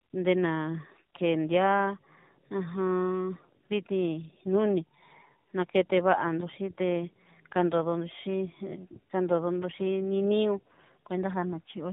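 From start to finish the speech carries tandem speech coding: it was decoded and re-encoded across links, and the sound points to two low-rate speech coders in a row, likely iLBC then AMR-NB. Unlike a single codec pass, the roughness and warble compound, and nothing survives above 3.8 kHz.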